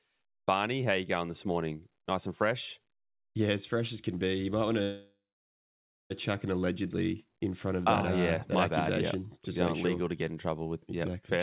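At 4.82 s a call audio freeze sets in and lasts until 6.12 s. The likely cause is held-up packets draining the jitter buffer. The last sound is stretched into a fading buzz or hiss and then about 0.9 s of silence. Because the audio resumes where it stopped, nothing is lost, but the timing slips by 1.28 s. On a spectrogram, with content already capped at 4 kHz by the call codec, a smeared, fading band gives way to a blank gap.

From 11.37 to 11.41 s a jitter buffer speed-up cuts away about 50 ms of pitch periods to shrink a backlog. The sound runs at 236% speed at unchanged pitch, so it sounds hurried. In the waveform, repeated cycles vanish and the periods butt together.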